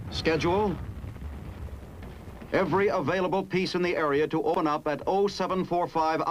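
At 0.96 s and again at 4.54 s the audio jumps abruptly, with roughly 70 ms missing each time. This is likely a dropped buffer (overrun). On the waveform it shows as a sudden discontinuity with no gap. The spectrogram shows a thin vertical broadband line there.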